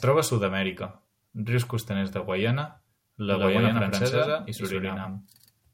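Speech, with a doubled audio track from 3.31 s to the end. An equally loud, dry copy trails about a tenth of a second behind, likely from an out-of-step edit or second capture path.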